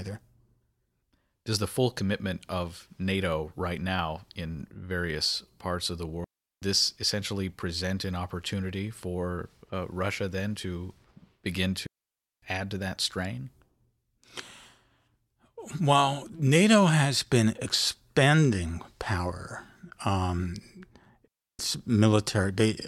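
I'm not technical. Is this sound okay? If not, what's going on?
No. A digital wireless dropout cuts the speech at 6.24 s, 11.87 s and 21.28 s, leaving clean silent gaps of 0.38, 0.56 and 0.32 seconds. The wireless receiver lost too much signal and briefly muted.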